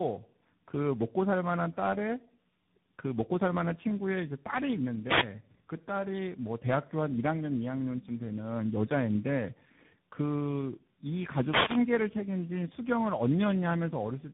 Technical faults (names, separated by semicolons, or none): tandem speech coding; wireless microphone noise hit